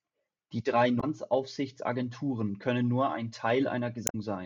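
Damaged data in the compressed stream at 0.97 to 1.04 s and 4.07 to 4.15 s throws the decoder off its frames, producing brief glitches in the speech.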